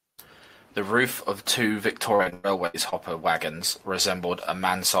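Just after "roof of two", from 2.15 to 2.94 s, the speech breaks into repeated packet loss (robotic sound). Around half a dozen holes open in quick succession, the longest about 100 ms, and the receiver covers each by extending the last received sound. Roughly a third of that stretch is synthetic fill, about 0.28 s in total, which gives the choppy quality where pieces of the speech drop out.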